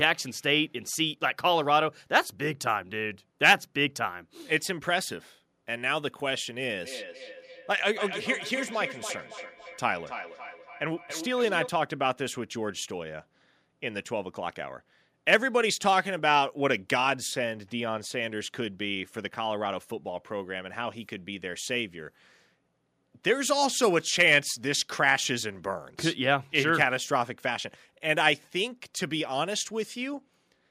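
From 6.82 to 11.77 s the speech comes back at a steady interval of roughly 300 ms, peaking at about 11 dB below the direct voice. This is feedback echo between two devices on the same call: one device plays the other's audio, that microphone picks it up again, and neither echo canceller removes it. Room reverberation would blur smoothly, but these repeats arrive as distinct copies at a fixed spacing.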